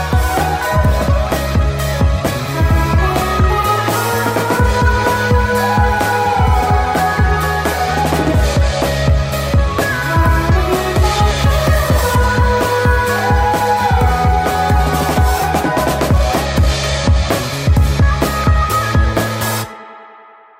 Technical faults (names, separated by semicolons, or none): wrong sample rate